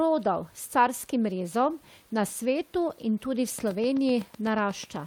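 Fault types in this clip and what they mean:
Train of clicks: From 3.59 s, just after "svetu in tudi v", to 5.07 s, a regular ticking runs at 8 clicks per second, each pulse much the same shape and peaking a few dB above the speech. It carries on through the gaps, where the room noise, about 35 dB below the speech, would otherwise be all that is heard. The steady repeating pulse points to a likely cause in interference from nearby equipment or a faulty connection or power supply.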